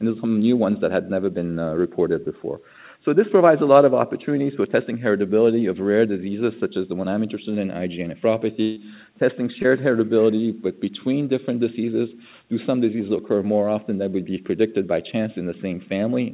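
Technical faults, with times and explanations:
2.24–2.28 s and 9.62–9.66 s, short concealed packet loss: About 20 ms of audio never arrived in time. The receiver extended the preceding sound to fill the hole, then blended back into the real signal. Each gap is heard as a brief smear or wobble.
8.62–8.78 s, burst of packet loss: About 140 ms went missing in a row. The receiver kept continuing the last sound for roughly 150 ms while fading it down, with no silent stretch. This gives a held buzz or fading hiss, then the audio resumes further on, skipping the lost part.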